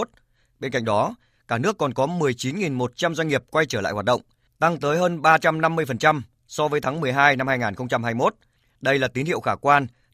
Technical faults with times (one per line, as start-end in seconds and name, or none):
none